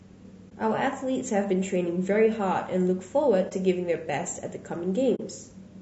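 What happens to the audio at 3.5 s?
At 3.49 to 3.52 s there is AAC frame loss with muting: a missing block of about 20 ms, consistent with one lost frame, fades out and back in through the overlapping windows, leaving a brief dip. Around it, the speech has a rough, grainy texture with noise between harmonics, likely from low-delay AAC compression (AAC-ELD) at a low bitrate, around 32 kbps.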